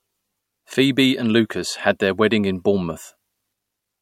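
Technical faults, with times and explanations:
Throughout: low-bitrate audio saved at a high bitrate. The speech has nothing above 16.6 kHz and keeps the smeared detail of heavy compression. This points to a first MP3 encode near 65 kbit/s, likely re-saved at a high bitrate, which cannot restore what was lost.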